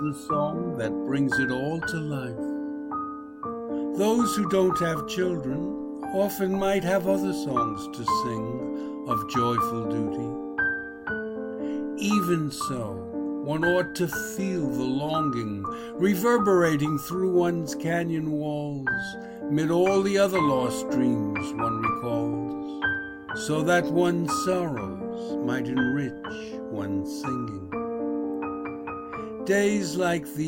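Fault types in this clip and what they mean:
No faults can be heard.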